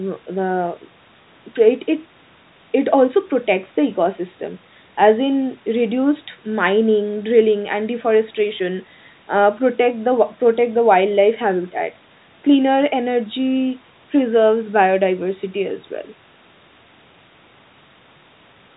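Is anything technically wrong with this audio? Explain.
No, nothing here is technically wrong: the narrow band is the expected ceiling of telephone-grade coding applied after ordinary call microphone processing, and beyond that neither stage adds more than the usual trim of the lowest bass and at most a faint quantisation noise that follows the speech level.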